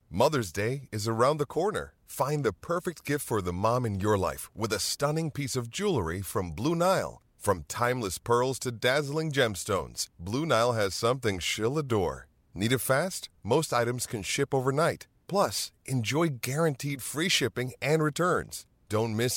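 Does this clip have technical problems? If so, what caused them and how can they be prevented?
No, this clip has no technical problems.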